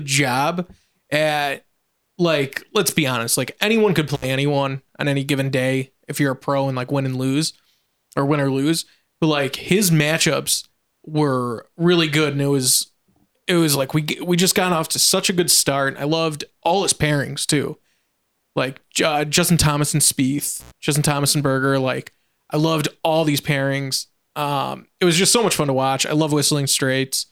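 At 4.14 s, between "honest like anyone could" and "anyone on any given", and again at 20.60 s, an intermittent contact opens the line for 62 ms and then 95 ms. Crackle marks each edge and faint hiss fills the gap, unlike a clean digital dropout's silence.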